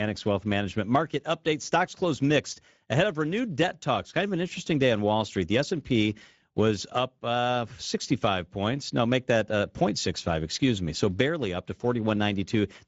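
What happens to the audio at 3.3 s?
At 3.3 s the speech sounds plainly hoarse and grainy, with nothing above 7.7 kHz. This is Speex codec damage throughout, from a CELP coder starved of excitation bits.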